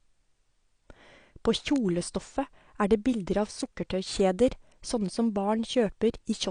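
A speech recording with audible codec damage throughout: nothing is present above 9.8 kHz, and the remaining band sounds dull and smeared, with a warbling, fizzy texture on sibilants. This is likely AAC compression, with the AAC-LC encoder quantising coarsely at a setting that fits a low bitrate near 32 kbps. Two bit error spikes are also audible as isolated sharp ticks at 1.76 s and 5.06 s. Each is a brief run of corrupted samples whose values jump by a power of two and snap back, producing a broadband click with no relation to the speech.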